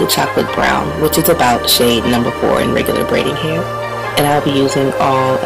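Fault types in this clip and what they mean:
Hard clipping: The audio is driven about 14 dB beyond what a stage in the chain can pass, so every peak is sliced flat at the limit. Roughly 7 percent of the waveform sits against that ceiling, which is enough for the squared-off tops to spray harmonics high into the spectrum. The result is a harsh, buzzing fuzz riding on every loud moment for the whole clip, not just occasional crackle on the biggest peaks.
Loud pop: A single sharp pop lands at 4.49 to 4.51 s, rising a few decibels above the surrounding level before dying away almost at once. The audio carries on underneath it without interruption, so this is an added pulse, not a dropout or a cut. A brief electrical transient is the likely source, such as a switch, a connector being disturbed, a static discharge or a momentary driver glitch, shaped by the circuitry downstream.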